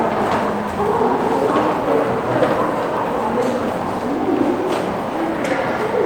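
Nothing in this recording of everyday sounds stood out as a technical problem on listening.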